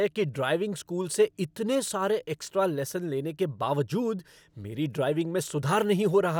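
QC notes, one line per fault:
No faults noted on the speech track.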